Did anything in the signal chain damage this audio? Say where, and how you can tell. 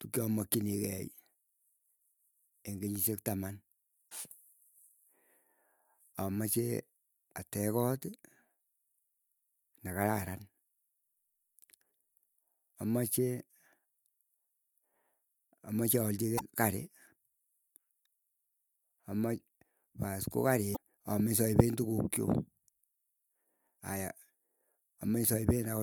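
Yes: damaged data in a compressed stream at the codec stage, with brief glitches at 4.07, 16.36, 20.73 and 23.77 s, each a few tens of milliseconds. Corrupt frames lose decoder sync, which shows as broadband smears on the spectrogram and waveform discontinuities.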